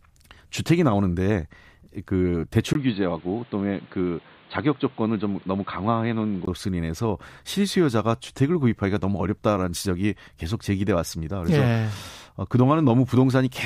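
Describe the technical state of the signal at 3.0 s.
At 3.0 s the speech sounds dull and boxy, with nothing above 4.5 kHz, a faint new background noise well under the speech, and loudness about the same as before. The change begins at 2.73 s with a 20 ms gap and lasts until 6.47 s. The likely cause is an input switched to a poorer device: mid-recording the capture moved to a narrower-band microphone or headset profile carrying its own tone and noise floor.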